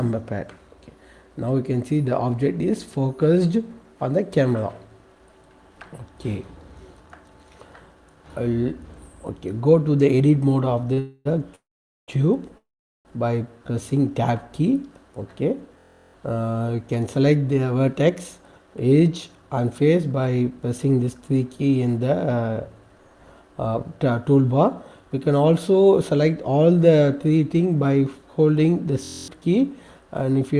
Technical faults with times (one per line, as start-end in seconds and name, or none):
10.93-10.99 short stall from a late packet
10.99-11.27 call audio freeze
11.55-12.10 call audio freeze
12.58-13.07 call audio freeze
13.59-13.82 jitter buffer slow-down
15.79-16.14 system hang loop
16.89-21.29 jitter buffer speed-up
23.67-24.23 jitter buffer speed-up
29.05-29.28 system hang loop